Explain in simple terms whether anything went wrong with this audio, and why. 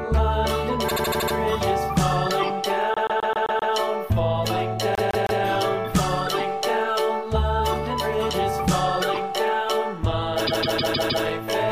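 Yes, the audio stutters in four places because of repeated frames: short chunks of the compressed file got played over and over. At 0.88 s a 78 ms chunk loops six extra times, at 2.94 s a 131 ms chunk six times, at 4.95 s a 157 ms chunk three times, and at 10.46 s a 157 ms chunk five times, each adding roughly half to three-quarters of a second.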